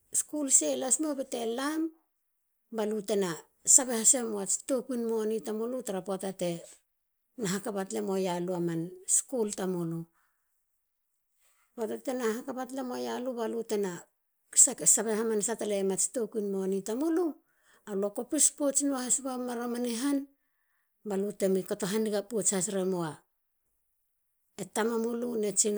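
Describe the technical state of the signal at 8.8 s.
At 8.8 s the signal is intact, with no audible technical fault at that moment.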